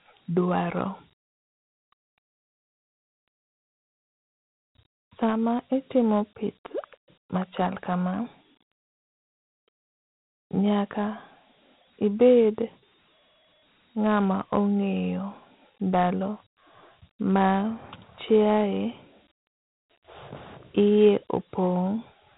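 Throughout the clip, the speech has passed through Dialogic VOX ADPCM coding, storing each sample as a coarse 4-bit step. Nothing survives above 3.9 kHz, pointing to an 8 kHz, 32 kbps stream, and a plainly audible gritty hiss clings to every syllable.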